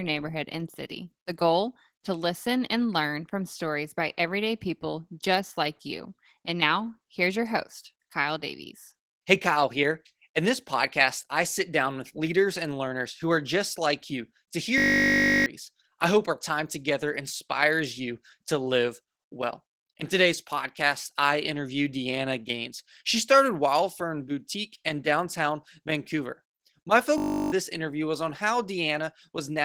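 Throughout, the speech carries plainly audible Opus voice compression, its coarse hybrid coding sounding hoarse and slightly robotic, consistent with a bitrate around 16 kbps, with grainy, smeared upper bands on a spectrogram.

At 14.78–15.46 s and 27.18–27.52 s, a system hang loop repeats one 20 ms slice as a steady 50 Hz buzz. The waveform shows identical repeating cycles where roughly 0.7 s and 0.3 s of audio are lost.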